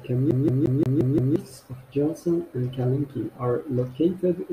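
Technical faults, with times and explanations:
0.31–1.36 s, CD stuck on one turn: a scratch keeps throwing the laser back one track, so one 175 ms slice of speech repeats six times with a brief mute at each jump; the strictly even period, unlike irregular dropout stutters, marks a skipping disc.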